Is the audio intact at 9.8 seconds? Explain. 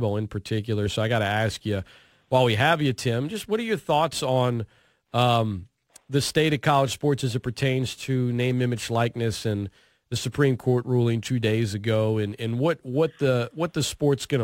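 No, at 9.8 s the speech carries crude rate conversion, running throughout. Dropped samples, likely from a 48 kHz to 44.1 kHz conversion, leave a gritty fizz about 30 dB down, with faint inharmonic lines on a spectrogram.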